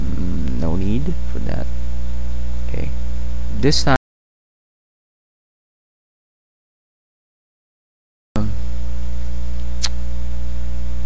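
An audio dropout to silence runs from 3.96 s to 8.36 s, about 4.4 s in which the sound cuts off abruptly and returns mid-flow with no room tone between, most likely a lost input or a brief mute while recording continued. On a waveform this appears as a flat line, and on a spectrogram as a blank band across all frequencies. The call-path coding through G.722 at 64 kbps leaves nothing above 8 kHz, seen as an empty region at the top of the spectrogram.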